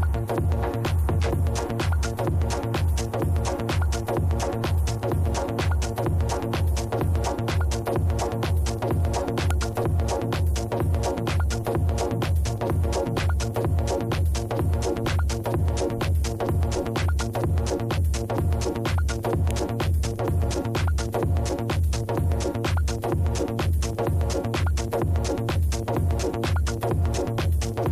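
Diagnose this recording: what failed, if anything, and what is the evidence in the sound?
The fault is a file header played as audio, at the storage stage where pieces were joined. Two sharp, loud clicks land at 9.51 s and 19.51 s. They are exactly 10 seconds apart. That fits a stream built from 10-second pieces. Each piece kept its WAV header when it was joined. Those few dozen header bytes were read as samples. They snap out regardless of the surrounding sound.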